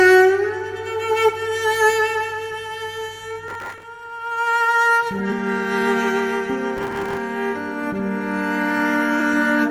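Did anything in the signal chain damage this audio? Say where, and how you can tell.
Yes, at two stages. The first is the codec, through damaged data in a compressed stream. Short chirps or blips land at 1.28 s, 5.31 s and 9.2 s. Each lasts under 20 ms. Bytes in the compressed file were corrupted at those points. The decoder misread those frames and lost sync. It then hunted for the next valid frame header. The garbled output in between is the blip you hear.

The second is the driver or buffer stage, through processor overload crackle. Gritty tearing rides on the sound from 3.48 to 3.83 s and again from 6.77 to 7.17 s. The processor could not finish its small buffers in time. The bursts point to buffers of about 5 ms, missed dozens of times over each stretch. Each miss replayed a scrap of old audio with hard edges. Those clicks pile up into crackle, which stops when the load eases.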